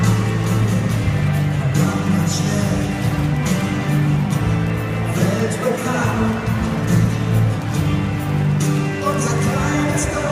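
Word clock ticks run from 0.32 s to 10.11 s, sharp clicks of uneven strength recurring about every 0.4 seconds, around thirty in all. The receiving device is free-running rather than locked to the sender's clock, and each drift past drops or repeats a single sample, which points to a clock mismatch of roughly 50 ppm.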